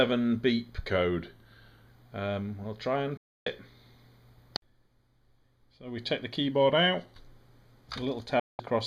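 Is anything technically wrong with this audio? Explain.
Yes. There are two kinds of fault, each heard twice.

From 0.9 to 1.87 s and again from 6.52 to 7.20 s, the sound slows by about 5.7% and drops about a semitone. Then it snaps back. This is likely a drift correction step, where clock-matching software abruptly changed the playback rate to manage its buffer.

From 3.17 to 3.47 s and from 8.39 to 8.60 s, the audio mutes after a very fast fade of about 3 ms. The gaps last about 0.29 s and 0.19 s. This is a digital broadcast dropout. The receiver muted when frames were lost, so that audio is gone.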